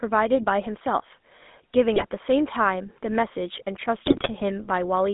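A buzzy, gravelly roughness runs through the whole clip, with the sound confined to roughly 200 Hz to 3.6 kHz. That is the GSM full-rate codec, which fits a 13 kbps stream: it rebuilds the vocal tract from a coarse pulse excitation, and the damage is plainly audible.

From 1.96 to 2.06 s, and again from 4.06 to 4.3 s, the audio breaks into squawks, pops and gargling. These are GSM bit errors. Corrupted filter, pitch and gain values warped the spectrum and level frame by frame, with bit error rates of about 4.5% and 3.5%.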